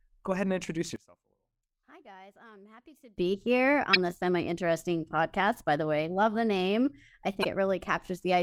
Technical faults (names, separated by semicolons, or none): one channel inverted; damaged data in a compressed stream